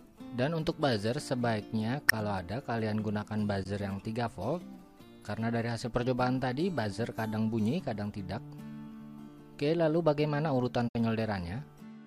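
At 2.08–2.13 s, 3.63–3.70 s and 10.88–10.95 s, corrupt frame concealment: the decoder papered over damaged AAC frames, fitting two or three each.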